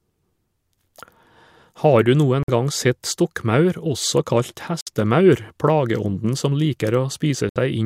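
At 2.43 s (between "du noen" and "gang sett stokkmaur også"), 4.81 s (after "sett stokkmaur også kalt") and 7.49 s, the speech drops to silence for 53, 59 and 66 ms, likely Bluetooth stalls from a drained headphone buffer. Each time, the speech then picks up again.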